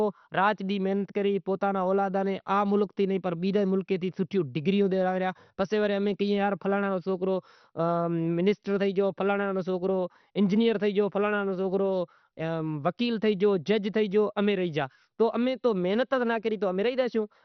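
Across the whole recording the speech sounds dull and gurgling, with a granular, watery roughness on every syllable. This is the sound of heavy MP2 compression, likely at a low bitrate of around 48 kbps. With too few bits to go round, the encoder shut off its upper sub-bands, so nothing survives above 6.2 kHz, and the bands that remain are coarsely quantised. A spectrogram shows a hard ceiling at 6.2 kHz, with blocky patches flickering in and out just beneath it.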